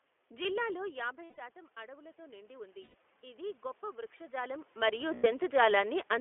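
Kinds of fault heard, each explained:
iLBC codec: The sound is narrow and slightly rough and synthetic, confined to about 300 Hz to 3.4 kHz. This fits iLBC's 15.2 kbps mode coding each 20 ms frame independently.
automatic gain rising: From 0.79 to 4.68 s the sound and room noise swell together by about 9 dB, as gain control compensates for input that fell about 16 dB.
lost iLBC frames: Gaps at 1.25 s (140 ms), 2.82 s (120 ms) and 5.14 s (100 ms) sound like held, buzzy vowels where the decoder repeats the last pitch cycle, recovering immediately.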